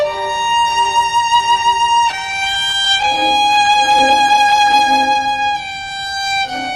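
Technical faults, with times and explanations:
2.11–4.85 s, repeated stalls (stutter): dozens of brief gaps, none over 17 ms, are filled by continuing the last sound, so nothing is lost; the waveform shows many tiny copied slices.
4.85–6.72 s, jitter buffer slow-down: repeated pitch periods add 0.24 s, so playback runs at 87% speed with unchanged pitch; spectrogram harmonics stretch horizontally without shifting.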